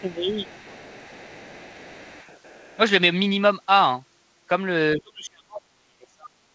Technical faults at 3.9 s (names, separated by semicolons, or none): none